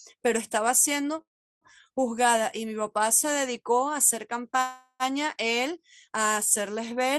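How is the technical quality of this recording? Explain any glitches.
The recording has two call audio freezes. At 1.21 to 1.64 s, a brief buzz or hiss continuation fades into about 0.37 s of silence. At 4.61 to 5.03 s, a fading buzz or hiss fills about 0.38 s, ending in about 0.05 s of silence. In both, the sound then resumes where it stopped, likely because delayed packets drained the jitter buffer.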